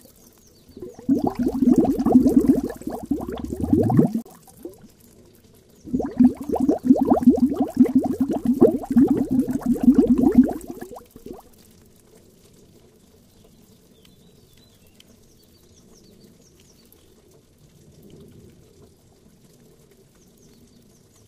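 A Bluetooth dropout cuts this recording of sounds from 4.22 to 4.28 s. The output falls silent, with about 30 ms of audio missing, which fits two lost packets. It is likely caused by packets arriving too late at the headphones, after which playback resumes further along.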